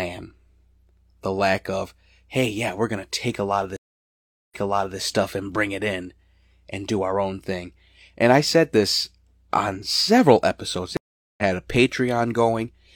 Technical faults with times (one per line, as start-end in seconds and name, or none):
3.76-4.98 stream reconnect
10.97-11.43 stream reconnect